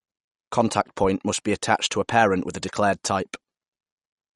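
MP3 compression runs throughout the whole clip, and it is the likely cause of the damage heard in the speech. Nothing remains above 11.2 kHz, so the top of the spectrum is sheared off flat, and the coding damage is plainly audible. This fits an encoder starved of bits, around 48 kbps. With too few bits it dropped the treble at a fixed cut-off and discarded weaker frequency detail, leaving the speech dull and watery.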